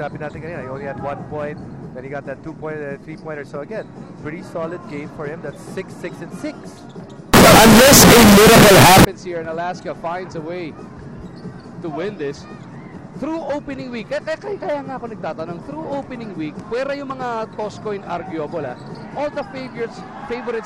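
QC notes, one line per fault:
7.34 to 9.05 s, signed and unsigned mixed up: for just under two seconds the sound turns into a wall of very loud, harsh distortion, and the quiet bits come up as loud as everything else. That's likely the samples being read with the wrong sign convention, which flips the top bit, so every pass through zero leaps across the full range instead of staying small. The grit fits 16-bit data read that way.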